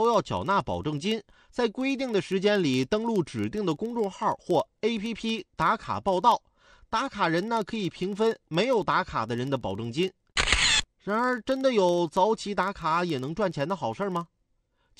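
Running the whole way through the speech there's a low, regular buzz at about 21.5 Hz. That's the classic filter restarted on every block: the filter throws away its memory at each block boundary and starts again from silence, so every block opens with a little transient. The tick rate fits a 2048-sample block, and because those ticks ride on the signal, the buzz gets louder and softer with the speech level.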